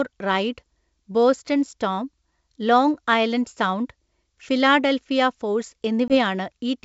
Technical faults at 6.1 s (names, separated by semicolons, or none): packet loss on an ADPCM call